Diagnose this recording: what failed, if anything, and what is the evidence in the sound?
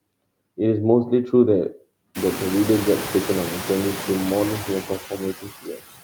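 Between phrases the background drops away and comes back under the speech. These are noise suppressor artifacts from the call-processing stage. The suppressor estimates the steady noise floor and pulls down every band it assigns to noise, about 20 dB here, frame by frame. The effect gets harder to ignore after the room noise rises by about 25 dB at roughly 2 s, leaving it only about 13 dB below the speech.

From 5.37 to 5.82 s, parts of the speech turn faint and swallowed, as if soft sounds and endings were clipped away. This is speech cut by the noise suppressor, again in call processing. With the background now this loud, the suppressor mistakes low-level speech energy for noise and attenuates it along with the floor, by up to about 20 dB. Around a third of a second of speech within that window is affected.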